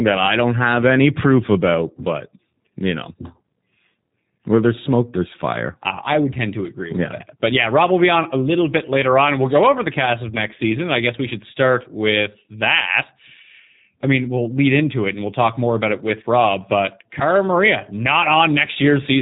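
Throughout this speech clip the sound is narrow and slightly rough and synthetic, with nothing above about 3.8 kHz. That points to G.729 codec damage, probably the G.729A variant at 8 kbit/s. It rebuilds each frame from a vocal tract filter, pitch predictor and sparse pulses.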